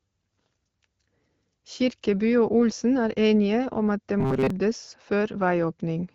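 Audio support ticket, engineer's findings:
Robotic sound from repeated short buffers, 4.20–4.50 s, right after "enige om at det". Speech turns into a rigid metallic buzz near 133 Hz. Likely a buffer underrun in the playback path: a block of about 7.5 ms is looped while most of the real audio is skipped.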